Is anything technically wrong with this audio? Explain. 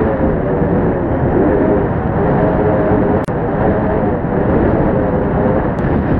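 Yes. From 3.25 to 3.28 s there is a gap at a join of encoded pieces: a 34 ms gap in otherwise continuous sound. The audio appears to have been encoded in separate segments and spliced without trimming, so the encoder's start-up delay and last-frame padding remain at the seam. The result is a brief dropout with smeared edges, after which the sound resumes exactly where it left off.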